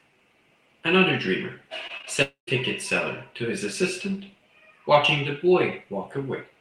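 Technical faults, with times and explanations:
1.87–2.08 s, repeated packet loss (robotic sound): audio packets went missing four times in quick succession, the longest hole 23 ms. Each was patched by stretching the preceding sound, so about a third of this span is synthetic fill, giving choppy speech with fragments absent.
2.22–2.49 s, long network dropout: the speech breaks off into a fading buzz that runs for roughly a quarter of a second, with about 120 ms of silence within the break, before the speech resumes with a piece missing. The likely cause is a network interruption long enough that concealment of the last sound gave out.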